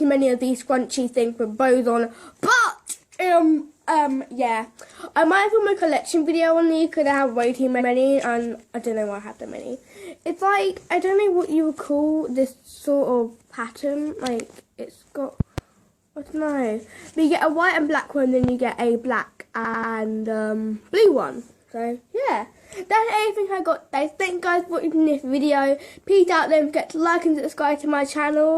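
At 7.76 s a 93 ms block plays twice. This is a repeated frames fault: a run of compressed data, consistent with two codec frames, reached the decoder a second time. The audio stutters. The waveform shows an identical copied segment.

At 15.40 s and again at 18.44 s there are loud pops. Each is a sharp double pop on top of the sound, which carries on underneath. The first peaks about 15 dB above the signal and the second about 10 dB. Their likely cause is an electrical step from a switch, plug or static. On the waveform they are tall, narrow spikes, and on the spectrogram they are full-height vertical stripes.

At 19.60 s the repeated frames return. A 93 ms block plays three extra times, adding 0.28 s and a rapid, machine-gun stutter. This appears as four matching waveform copies.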